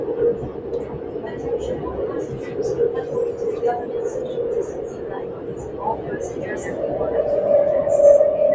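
Sustained parts and tails of these sounds keep sinking and swelling by around 10 dB throughout while onsets pass intact, the pumping of a speech noise suppressor applied to music or sounds, heard through call microphone processing that leaves nothing above 8 kHz.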